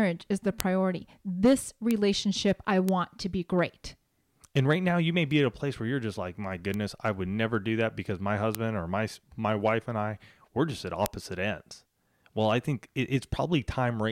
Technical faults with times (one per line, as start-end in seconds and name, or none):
0.60 bit error spike
1.91 bit error spike
2.89 bit error spike
5.31 bit error spike
6.74 bit error spike
8.55 bit error spike
11.06 bit error spike